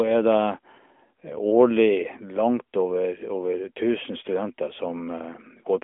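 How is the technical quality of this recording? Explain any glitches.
Nothing stood out as a glitch on listening; the speech carries the narrow, telephone-like band of an AMR narrowband mobile codec, with nothing above about 3.6 kHz, which is simply how this line sounds.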